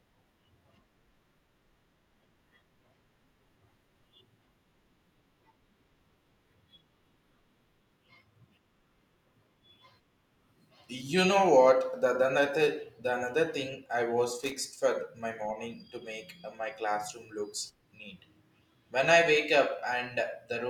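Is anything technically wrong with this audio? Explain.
Yes. At 14.42 to 14.52 s, between "another thing I was" and "for my morning to", there is loose connector crackle lasting about a tenth of a second. A worn or dirty contact in the signal path is making and breaking as it shifts, so the speech is chopped on and off in quick, uneven bursts, with pops where any DC on the line jumps. It comes across as a brief scratchy crackle.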